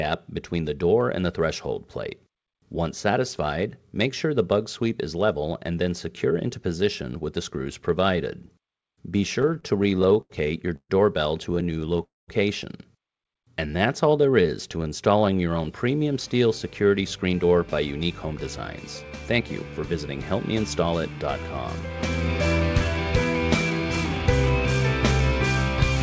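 Repeated stalls (stutter) hit the audio from 9.42 to 10.91 s and again from 11.55 to 12.01 s. Packets were reaching the receiver more slowly than they were being played out, so the jitter buffer kept draining. Each time, the receiver stretched the last sound to cover the wait. The first stretch has twelve such holds totalling 352 ms, about a quarter of that span, the longest lasting 132 ms. The second has seven short holds, none longer than 13 ms, adding 78 ms in all. The result is a dragging, stammering passage rather than lost material. A call audio freeze follows straight on, from 12.03 to 12.30 s. The last sound is carried on briefly and then gives way to about 190 ms of silence before the audio resumes where it stopped, pushing everything after it about a quarter of a second later. The likely cause is a burst of packets held up in transit that emptied the buffer completely. Jitter buffer slow-down runs from 13.44 to 15.42 s. 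To rebuild its reserve, the receiver repeated single pitch periods and fragments of pauses over and over, inserting 213 ms. Playback drops to about 90 percent speed at unchanged pitch, so sounds are drawn out. Jitter buffer speed-up then appears at 17.03 to 18.35 s, at 108 percent speed, and at 19.33 to 20.96 s, at 105 percent. With more audio queued than it wanted, the receiver trimmed short pitch-period-sized pieces, about a tenth of a second in each stretch, making the sound hurried at the same pitch. Throughout, the call path leaves nothing above 8 kHz, which fits G.722 at 64 kbps.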